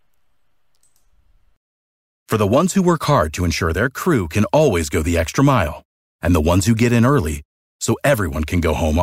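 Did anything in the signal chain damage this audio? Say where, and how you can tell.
No, nothing I can hear points to damage at any stage of the chain. Listening through the speech, I don't hear any event or change I could tie to a particular point in the path.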